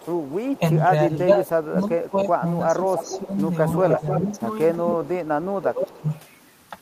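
Speech recording with two related faults. An echo leak puts a delayed copy of the speech back into the signal at 0.0–0.58 s, 2.95–3.19 s, 3.72–4.41 s, 4.75–5.09 s and 5.91–6.19 s. The copy trails by about 321 ms in the first stretch and about 304 ms afterwards. It ranges from faint to nearly as loud as the speech, likely from a far-end loudspeaker whose echo canceller let residual pickup through. Speech suppressed in double talk appears at 0.58–3.36 s, 3.83–4.29 s and 4.77–6.11 s. There the speech dips in level, by up to about 20 dB in the last span, while overlapping sound is present. This is likely the canceller turning everything down when it could not separate the talker from the echo.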